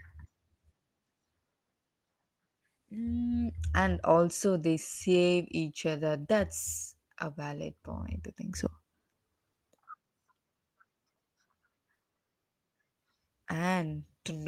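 A short speech recording with no technical faults to report. Nothing in the signal points to a problem with how it was captured, processed or carried.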